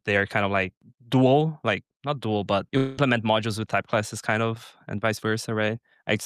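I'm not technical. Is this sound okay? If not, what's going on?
No. From 2.77 to 2.99 s the sound smears into a short fading buzz or hiss, then resumes with about 0.2 s lost, likely a long network dropout.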